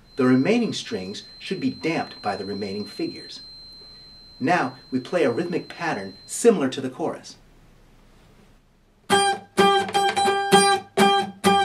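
A loudspeaker-to-microphone loop was likely held right at the edge of feedback from the start until 6.48 s, producing a feedback whistle: a thin, steady tone near 4.1 kHz sitting roughly 25 dB beneath the sound, swelling and fading slowly in level without building up.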